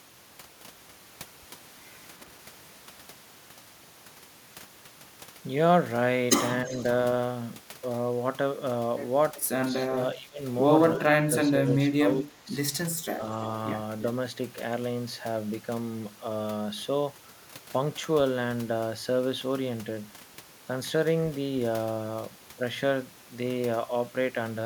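At 6.65 to 6.75 s the speech sinks by about 10 dB. This is the first instance of speech suppressed in double talk. Overlapping it, from 6.71 to 6.83 s and again at 9.36 to 9.44 s, there is an echo leak: a faint copy of the voice, about 25 dB below it, trailing by 335 to 337 ms. The likely cause is loudspeaker pickup that the far end's echo canceller did not fully remove. It adds a second, delayed layer of sound instead of taking anything away.

The suppression returns more strongly at 9.89 to 10.42 s, 10.96 to 11.56 s and 11.91 to 12.51 s, with the voice dropping by about 20 dB, and once more as a shallow dip of about 5 dB at 13.17 to 13.22 s. This is likely an echo canceller turning the talker down while the other side spoke. Here the voice itself sinks, with no delayed copy.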